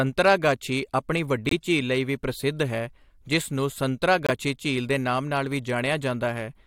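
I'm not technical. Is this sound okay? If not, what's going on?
No. This speech has two brief silent gaps called corrupt frame muted. Damaged data could not be decoded, so the player inserted silence. Each gap fits a single lost frame. The first runs from 1.49 to 1.52 s, just before "ਝੀਲ ਲਈ ਵੀ ਪ੍ਰਸਿੱਧ". The second runs from 4.27 to 4.30 s, after "ਪ੍ਰਸਿੱਧ ਹੈ ਜਿਸ ਨੂੰ" and before "ਝੀਲ ਦੇ ਨਾਮ ਨਾਲ".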